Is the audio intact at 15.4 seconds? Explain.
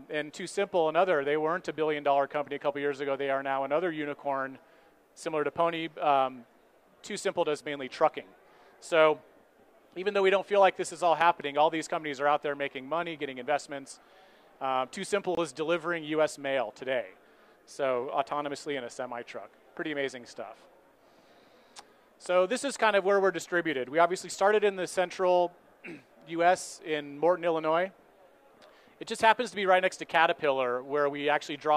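No. A gap at a join of encoded pieces falls at 15.35 to 15.37 s. Untrimmed encoder delay and end padding leave a break of about 23 ms before the sound resumes.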